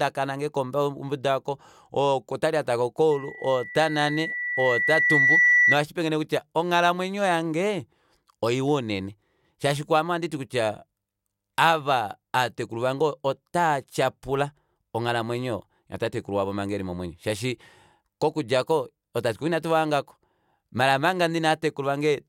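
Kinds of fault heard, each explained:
Loudspeaker feedback squeal: The microphone is picking up the loudspeaker it drives, and at one frequency the gain around that loop exceeds unity, so the tone keeps reinforcing itself on every pass. Here that happens at 2 kHz: from 3.11 s a single whistle rises out of the speech, swelling over about two seconds until it sits a few decibels louder than the talker, then stops at 5.78 s.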